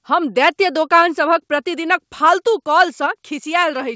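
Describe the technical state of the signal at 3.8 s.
At 3.8 s the speech is intact, with no dropout, glitch or distortion, only the normal band limit of the call path, with nothing above about 8 kHz, as expected from a G.722 wideband codec.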